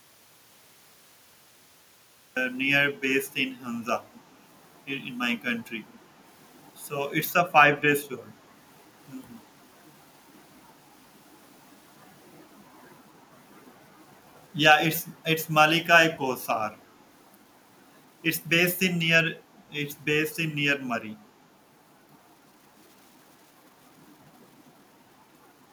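The clip opens in dead silence, with no room tone, until 2.37 s. This audio dropout to silence likely reflects a lost input while recording continued. Brief, very faint copies of the speech, trailing by 312 ms, surface at 4.15–4.19 s and 5.92–5.97 s. This echo leak likely comes from a loudspeaker echo canceller letting residue through.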